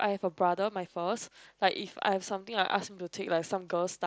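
No technical faults turn up anywhere in the speech, which arrives over an mSBC Bluetooth headset link with its band topping out around 8 kHz and only a light graininess from the codec on the louder moments.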